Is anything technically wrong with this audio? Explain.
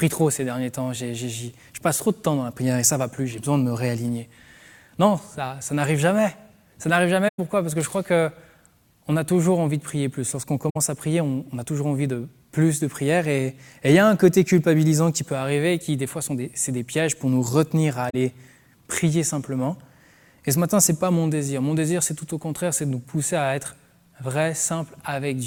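Yes. The sound drops out briefly three times: at 7.28 to 7.39 s for about 107 ms, at 10.69 to 10.77 s for about 64 ms, and at 18.10 to 18.15 s for about 43 ms. Each gap fades out and back in smoothly. This is AAC frame loss with muting. The decoder filled the missing frames with silence, and the overlapping transform windows tapered the edges. The longest gap fits a run of about five lost frames.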